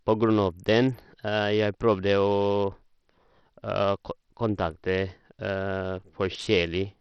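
Throughout the speech, the treble is thin and flickers in and out while a gritty, coarse noise and aliasing ride on the sound. This is likely Bluetooth SBC compression starved of bits, which fits a low bitrate near 64 kbps, leaving the upper sub-bands empty and the rest crudely quantised.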